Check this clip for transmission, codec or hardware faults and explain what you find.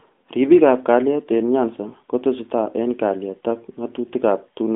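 Nothing here points to any fault.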